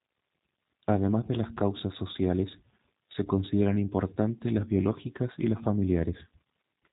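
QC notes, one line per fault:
Throughout, G.729 codec: nothing passes above about 3.8 kHz, and the speech has a plainly audible rough, buzzy, synthetic edge, as if it were rebuilt from a filter model and sparse pulses. That edge sets it apart from simple band-limiting, and it fits an 8 kbit/s G.729A stream.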